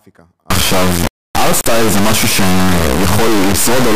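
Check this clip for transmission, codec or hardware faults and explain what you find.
One fault is present: integer read as float, running from 0.50 s to the end of the clip. From that point the speech gives way to an extremely loud, harsh buzz with a square-wave character, dropping to silence in the quietest moments. The audio is being decoded with the wrong sample format, which fits 32-bit integer samples being read as 32-bit floats. Those bit patterns become tiny, invalid or huge values, so the output slams between zero and the clipping limit.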